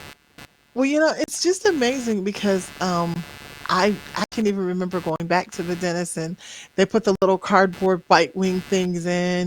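Computer activity noise runs throughout: processor and peripheral load modulates the shared audio ground, giving a buzzy chirp pulsing around 150 times a second, roughly 25 dB below the speech. Blocks of digital silence fall at 1.24 s (40 ms, between "you know" and "just amazing because"), 3.14 s (20 ms), 4.24 s (80 ms, before "even remember"), 5.16 s (40 ms, between "even remember" and "back to the dentist") and 7.15 s (66 ms). Likely unfilled buffers drop the audio abruptly to zero and back, so each is a hard-edged hole.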